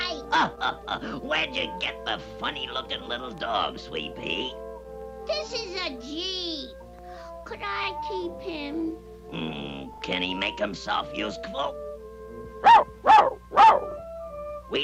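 Repeated frames occur at 7.83–7.87 s, 9.93–10.01 s and 13.91–13.95 s. A 40 ms block, consistent with two compressed frames, is replayed once, twice, then once, creating a brief stutter and lengthening the audio by 40, 80 and 40 ms.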